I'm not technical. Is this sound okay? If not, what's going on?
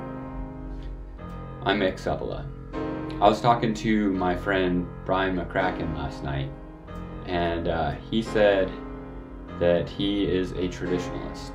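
Yes, this sound is okay, and nothing is going wrong with it.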